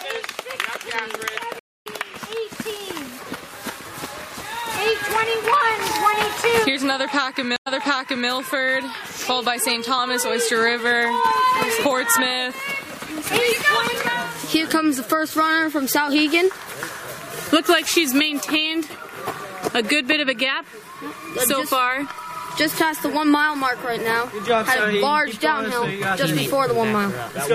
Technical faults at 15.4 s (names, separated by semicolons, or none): none